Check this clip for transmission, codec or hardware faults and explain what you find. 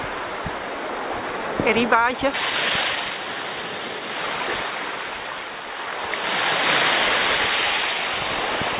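Two transmission faults are present, both around the 2.3 s mark, heard through a narrowband G.711 mu-law call path with nothing above 4 kHz.

Skip ahead at 2.34 s: about a second of audio was discarded while later audio was already queued, so playback jumps forward with no filler. The sound on either side of the cut is joined almost directly, and the missing stretch simply vanishes.

Jitter buffer speed-up from 2.38 to 4.1 s: the buffer was still holding more audio than its target, so the receiver trimmed short pitch-period chunks repeatedly, removing about half a second in total. Playback runs at 127 % speed with unchanged pitch, sounding noticeably hurried.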